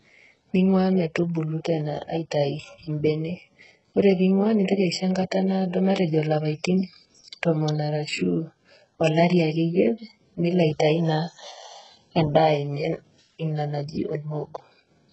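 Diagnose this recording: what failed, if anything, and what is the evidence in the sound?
The codec stage failed. The speech sounds heavily damaged by HE-AAC compression, likely at a very low bitrate near 8 kbps. Nothing real survives above 8 kHz. The treble is rebuilt from copied lower bands, so sibilants sound gritty and lispy throughout.

Pre-echo occurs at 4.64 to 4.68 s, just after "pee ing'ua". A short hiss runs about 43 ms ahead of the next attack. The codec spread quantisation noise over its whole block. Noise sized for the loud onset filled the quiet gap before it, smearing the attack.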